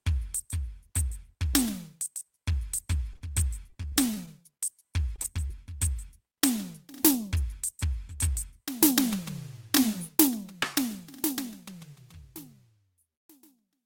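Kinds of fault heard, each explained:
Short concealed packet loss: About 20 ms of the music failed to reach the decoder, and the receiver patched each gap by extending the preceding sound before blending back in. This happens near 3.13 s, 5.16 s, 5.22 s and 5.48 s, with brief smears or wobbles. On a spectrogram the harmonics run on as flat, frozen streaks for a short moment. The waveform shows a short repeated cycle in place of the real detail.
Short stall from a late packet: Around 3.17 to 3.23 s a packet arrived late, the jitter buffer emptied, and the receiver held the current sound for about 42 ms until it came, then resumed at the same point. Almost nothing is lost, but the sound lingers unnaturally, with a faint buzz or dip, and the timing slips by that 42 ms. A spectrogram shows a held, unchanging column. The waveform shows a stretched, looping segment.
Repeated packet loss (robotic sound): From about 3.70 to 4.64 s losses come one after another, with nine gaps totalling about 140 ms and the longest 31 ms. 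Concealment fills around a sixth of that span. The music turns choppy, with pieces dropping out. A spectrogram shows a string of frozen, smeared slices interrupting the normal texture. The waveform alternates between genuine material and short repetitive patches.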